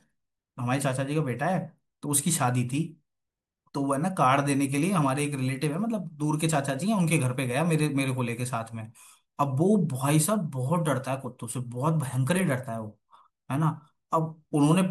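No technical faults can be heard anywhere in this speech recording.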